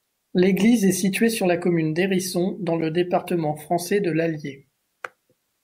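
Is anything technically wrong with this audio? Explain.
No, nothing technically wrong can be heard in this speech recording, and the signal stays intact and continuous throughout.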